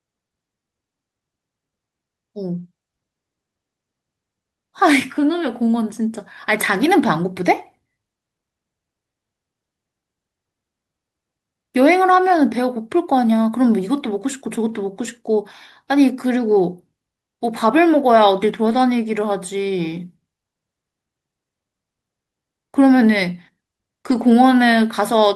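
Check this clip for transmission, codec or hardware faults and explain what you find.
The speech has five brief stretches where lost packets were rebuilt from error correction: 6.69–6.83 s, 12.11–12.17 s, 14.47–14.49 s, 18.65–18.79 s and 24.09–24.31 s, rebuilding roughly 80, 40, 20, 80 and 120 ms of audio. Each following packet carried a low-bitrate backup copy that the decoder played in place of the missing one. There is no dropout, but those moments sound rougher and noisier. On a waveform the signal stays continuous. On a spectrogram these spots show as short, grainier, less sharply defined patches.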